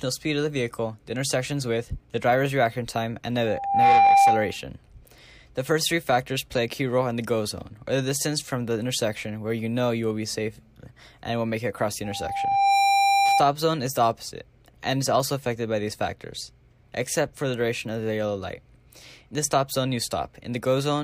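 Loudspeaker feedback squeal occurs twice, a steady 793 Hz tone from 3.46 to 4.56 s and from 12.04 to 13.49 s. The microphone is picking up its own loudspeaker with loop gain above one at that frequency. The tone swells over roughly 0.4 s and peaks about 10 dB above the audio the first time, then builds more slowly and stays about 5 dB above it the second time.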